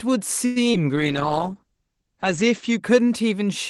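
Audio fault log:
0.45–0.58 s, call audio freeze: For about 105 ms the sound does not move on. The last moment is stretched into a buzzy tail that decays rather than stopping cleanly. The likely cause is packets held up in transit until the jitter buffer ran dry, so the receiver extended what it had. Nothing is lost; the rest simply arrives 105 ms later. On a spectrogram the harmonics smear into horizontal streaks that thin out. The waveform shows a tapering, repetitive stretch.
0.72–0.76 s, short concealed packet loss: About 20 ms of audio never reached the decoder, and roughly 17 ms of that hole was patched by continuing the previous sound before blending back into the real signal. It is heard as a brief smear or wobble. On a spectrogram it shows as a thin vertical seam where the texture briefly repeats or blurs. The waveform has a small discontinuity or a slightly doubled cycle pattern across that span.
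0.96–2.88 s, call bitrate drop: The Opus encoder was pushed from 32 kbps down to 9 kbps and held at the lowest rate for about 1.47 s. The coarser coding makes the speech rough and watery. The audio bandwidth also narrows from 12 kHz to 8 kHz, which dulls sibilance and air. On a spectrogram the energy above 8 kHz is sharply cut off, and the remaining bands look blotchy and quantised. The waveform envelope stays similar but is less finely detailed.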